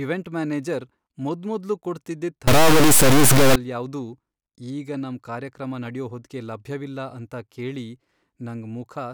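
From 2.47 to 3.56 s the speech gives way to an integer read as float fault: 32-bit integer samples are being interpreted as 32-bit floats. The reinterpreted bit patterns land either near zero or far past full scale, so the output slams between silence and the clipping rails. It sounds like a harsh, extremely loud buzzing square wave, cutting out where the speech goes quiet. The waveform shows flat-topped blocks pinned at the clipping limit; the spectrogram shows dense broadband energy with strong harmonic striping.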